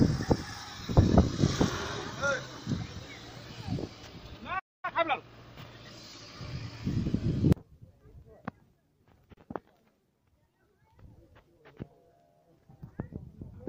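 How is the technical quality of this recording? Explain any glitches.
The recording has three audible glitches: a stall, a hurried stretch right after it, and a short dropout later on.

At 4.59 s the sound stops in mid-flow and stays silent until 4.85 s, about 240 ms. This is a playback stall. The likely cause is that the player ran short of data, or its thread was held up, so nothing reached the output. When sound returns, it resumes where it stopped.

From 4.85 s to 5.33 s the audio runs hurried, at about 1.5 times normal speed, but its pitch stays where it was. This is time-compressed catch-up. The player clears the backlog built up during the stall by dropping tiny slices and cross-fading across the cuts.

At 9.34 s a brief hole of about 34 ms opens in otherwise continuous sound, ending at 9.37 s. This is a gap at a join of encoded pieces. Two separately encoded sections were butted together without trimming. 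The encoder's start-up delay and the padding in the last frame both survive as silence. The codec smears the edges, and the sound then continues exactly where it left off.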